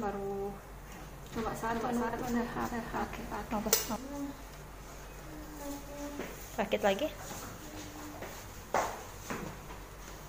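From 1.32 to 3.96 s, a doubled audio track, likely from a second, slower capture path, adds an equally loud copy about 0.4 s behind, starting and stopping abruptly. Frames out of order, with two neighbouring runs of frames decoded in swapped order, garble 2.08–2.18, 4.75–4.80 and 8.44–8.54 s into a brief flutter.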